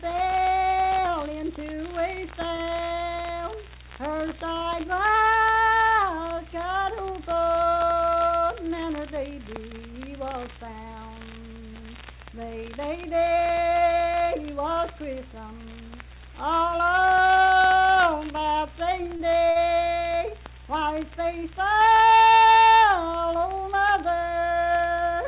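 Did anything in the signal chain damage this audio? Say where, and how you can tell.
Yes, and it's all at the network and jitter buffer stage. Short stalls from late packets sit at 2.56, 2.84 and 4.58 s: the last sound gets held for 24, 59 and 24 ms until the packet turns up, with nothing lost.

Around 14.23 to 14.79 s there's a jitter buffer speed-up. The receiver trimmed roughly 40 ms of pitch-period chunks, so things run about 5% fast at unchanged pitch.

Then repeated stalls (stutter) between 19.04 and 19.58 s: three separate holds totalling 90 ms, the longest 54 ms, about 17% of that stretch concealed, so it drags.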